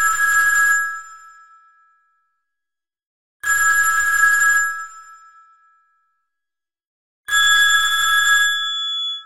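A feedback whistle enters at 7.26 s and runs to the end of the clip at about 9.25 s: a thin, steady tone near 3.4 kHz sitting about 5 dB below the main sound and swelling and fading slowly in level. The likely cause is a loudspeaker-to-microphone loop held just at the edge of feedback, ringing at one frequency without building further. On a spectrogram it shows as a single bright horizontal line at 3.4 kHz from 7.26 s onward. The waveform envelope thickens slightly there.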